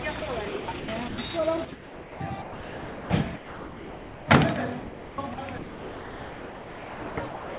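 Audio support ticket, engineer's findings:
Sound dropped by the voice detector: sender VAD likely read sound as background and stopped transmitting, so the receiver inserted comfort noise. Sound gives way to steady noise at 0.2 s (20 ms) and 3.36–4.28 s.

Sound chopped by the voice detector: sender VAD likely toggled between send and no-send repeatedly, with comfort noise filling each gap. Choppy sound at 0.48–1.18 s, 1.72–3.1 s and 4.8 s to end, all within the 4 kHz band of the G.711 path.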